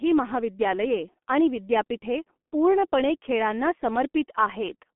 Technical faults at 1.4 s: G.723.1 codec

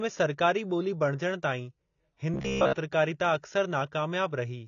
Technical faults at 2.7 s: AAC compression; robotic sound from repeated short buffers

